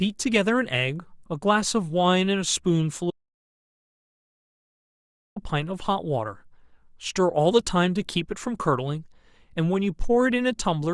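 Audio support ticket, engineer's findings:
Audio dropout to silence, 3.11 to 5.36 s, about 2.26 s of speech lost. Sound cuts mid-flow to silence, no room tone, unlike a pause or noise gate. Likely input loss (device disconnect, failed link or mute) while the recorder kept writing silence.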